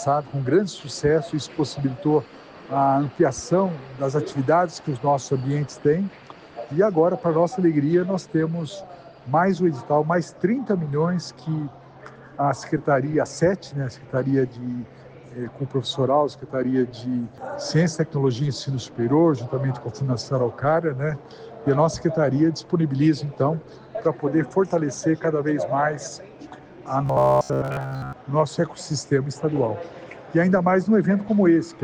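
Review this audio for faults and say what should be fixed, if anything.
From 27.06 to 28.13 s the sound collapses into robotic sound from repeated short buffers: a rigid, metallic buzz at a fixed 66.8 Hz. This likely comes from the playback repeating roughly 15 ms chunks, and most of the sound in that stretch is replaced by copies. Unlike mains hum, the sound still follows the original roughly. Preventing it means keeping the audio supply ahead of playback with a larger jitter buffer or higher-priority audio processing.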